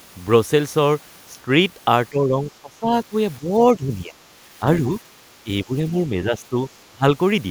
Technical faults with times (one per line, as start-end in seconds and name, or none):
2.10-4.22 speech suppressed in double talk
5.44-6.58 speech suppressed in double talk
6.90-7.04 speech suppressed in double talk